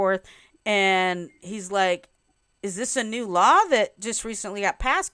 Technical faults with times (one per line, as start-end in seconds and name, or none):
none